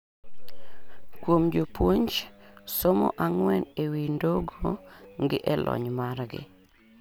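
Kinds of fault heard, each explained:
Repeated buffer: a 5 ms slice of the speech plays twice at 5.04 s because fresh audio arrived late, leaving a hard join and a click or brief buzz rather than a stutter. Unlike a dropout, nothing goes silent; the brief hiccup skips only a few milliseconds.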